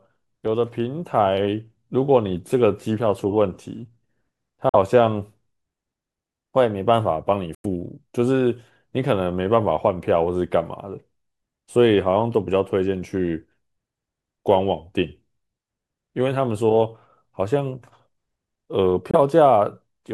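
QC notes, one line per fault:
4.69–4.75 s, Bluetooth dropout: speech cuts to silence for 46 ms.
7.55–7.66 s, Bluetooth dropout: a 93 ms hole, the longest.
19.11–19.15 s, Bluetooth dropout: a 23 ms gap. The lengths step in units of about 23 ms, which points to whole packets missing their delivery deadline, likely over the wireless link. Speech resumes later in time, as if it had played on, rather than picking up where it stopped or repeating, which sets it apart from a stutter or buffer underrun.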